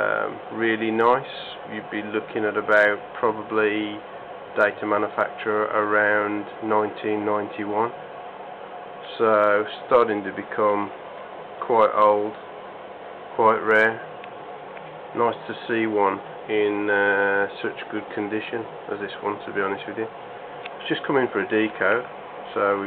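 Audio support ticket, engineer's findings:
No faults found on listening, nothing here points to any component needing attention.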